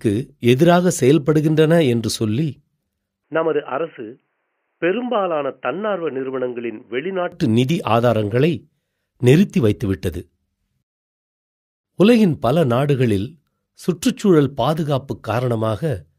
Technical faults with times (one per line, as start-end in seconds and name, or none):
3.24-7.32 input switched to a poorer device